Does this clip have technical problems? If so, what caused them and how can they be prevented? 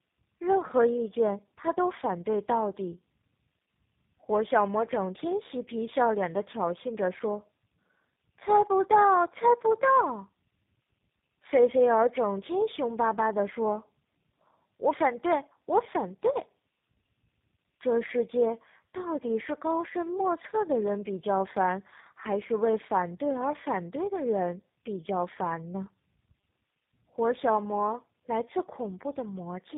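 Yes. The whole clip has tandem speech coding: it went through GSM full rate at 13 kbit/s, then G.711, then G.729A at 8 kbit/s, so it was encoded by two speech codecs back to back. That leaves the speech rough, muffled and warbly, with nothing above 3.8 kHz. To prevent it, keep one codec end to end, or pass the compressed stream through untouched at each border.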